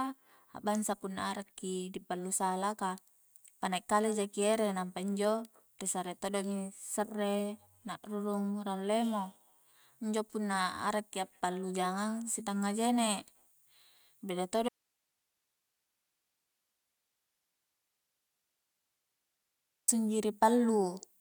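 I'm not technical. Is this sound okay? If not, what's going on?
No. From 14.69 to 19.88 seconds the speech suddenly vanishes, leaving only faint hiss: an audio dropout to a faint residue, likely a signal connection briefly lost.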